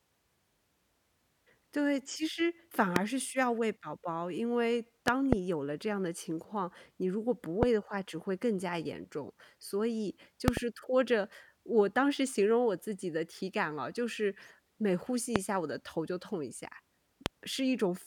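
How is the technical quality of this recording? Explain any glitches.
The speech is marred by six loud pops, at 2.96–2.98 s, 5.08–5.35 s (a double), 7.63–7.65 s, 10.48–10.59 s (a double, slightly softer), 15.36–15.38 s and 17.26–17.28 s. Each is a sharp thump around 20–25 dB above the speech, which continues underneath. The likely cause is voltage spikes from a plug, switch or static. On a waveform they are tall, narrow spikes; on a spectrogram they are thin vertical lines spanning all frequencies.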